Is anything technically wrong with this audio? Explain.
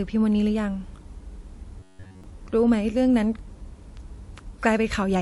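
Yes, there are two problems.

The whole clip shows signs of transcoding between lossy codecs. The top end is cut off, and the artefacts of two different codecs sit on top of each other. This is likely an MP3 encode that was then re-encoded to WMA. The second pass spends its bits on the first one's damage and adds its own. The top end is dull and the speech has a layered mix of artefacts throughout.

From 1.80 to 2.24 s there's robotic sound from repeated short buffers. The likely cause is audio arriving late, so the player kept looping the last chunk instead of playing what actually came next. For most of that stretch you hear repeats rather than new audio. The repeats impose a buzz at 93.8 Hz, which fits a loop of about 10.7 ms. The speech turns into a flat, metallic drone that only loosely tracks the syllables.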